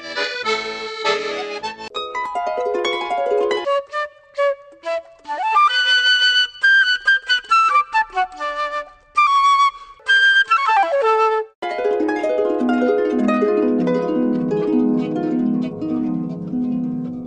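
No technical faults can be heard anywhere in this audio. Nothing in it points to a problem in the recording or playback chain.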